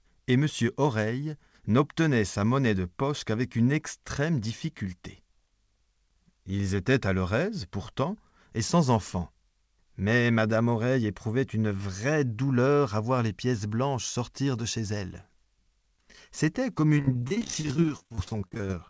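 Audio carried over a call path, with nothing above 8 kHz, which fits a G.722 codec at 64 kbps. From 16.98 to 18.77 s it breaks into repeated packet loss (robotic sound): some forty short holes, none longer than about 32 ms, each patched by stretching the preceding sound, so over a third of that stretch is filler. Unlike a single dropout, the gaps recur rapidly, giving a choppy, robotic texture with fragments missing.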